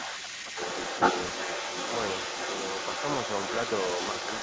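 A speech clip with the other side's voice leaking through from start to finish, at roughly the same level as the talker. The likely cause is loudspeaker echo the canceller failed to remove. Speech is also suppressed in double talk, dipping about 10 dB at 0.17 to 0.25 s and about 5 dB at 0.53 to 0.59 s.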